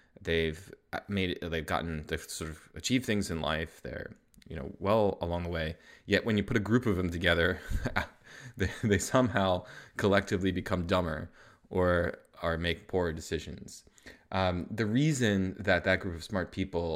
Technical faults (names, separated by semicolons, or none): none